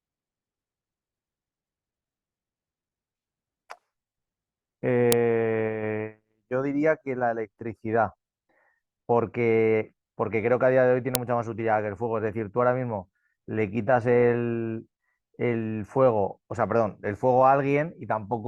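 At 5.12 s and again at 11.15 s there's a sharp, loud click cutting across the speech. That's a file header played as audio: the pieces were joined with their WAV headers left in, so those bytes get played back as a brief snap.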